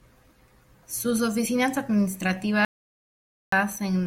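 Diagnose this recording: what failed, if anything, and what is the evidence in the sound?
An audio dropout to silence runs from 2.65 to 3.52 s, about 0.87 s of silence with no room tone, likely a lost input link, unlike a noise gate's gradual fade.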